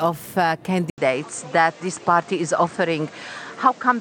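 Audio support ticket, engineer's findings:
Input switched to a poorer device at 0.9 s, likely mic or headset swap: 80 ms dropout, then band tops out near 8.9 kHz, new noise floor roughly 30 dB down, level unchanged.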